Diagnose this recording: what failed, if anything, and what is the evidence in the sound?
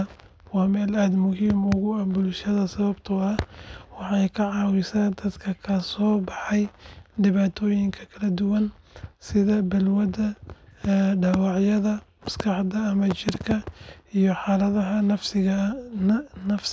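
Nothing failed anywhere here.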